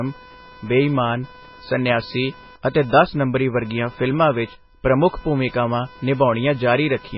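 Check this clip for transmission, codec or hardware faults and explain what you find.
Two faults run through the whole speech clip: computer activity noise, and codec damage that is most likely from MP3 compression.

The computer activity noise is a buzzing, chirping layer pulsing at around 500 Hz, roughly 25 dB below the speech. It comes from load changes in the processor, graphics card or mouse pulling on the ground shared with the audio circuitry. Because it follows the machine's workload rather than the speech, the buzz rises and falls independently of the speech, including in pauses.

The codec damage is heavy. Nothing is present above 5.6 kHz, so the top of the speech is sheared off and sibilants sound dull and clipped. Under the cut, the speech has a watery, swirling quality with metallic chirps as weak spectral components flicker in and out from frame to frame, and consonant onsets are smeared. 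The likely cause is an MP3 encoder starved of bits, which fits a rate around 16 kbps.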